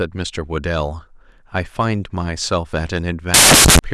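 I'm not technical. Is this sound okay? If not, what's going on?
No. Samples built from the wrong bytes, from 3.34 to 3.79 s near the end of the speech: the player stitches each tiny piece of sound together from mismatched bits, so the fine detail becomes huge, and you hear a burst of loud hiss.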